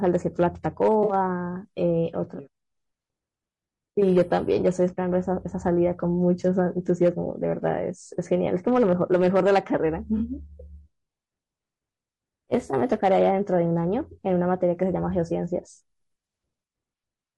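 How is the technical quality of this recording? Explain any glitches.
The recording is clearly degraded, with plainly audible coding damage throughout and one brief dropout near the start.

Throughout, the speech sounds rough and grainy, with noise between harmonics and a dull top band, likely from low-delay AAC compression (AAC-ELD) at roughly 32 kbps.

From 1.03 to 1.13 s, a short smeared, noisy patch of about 60 ms reflects AAC frame loss with concealment. The decoder filled the gap from the last good spectrum, which fits about three lost frames.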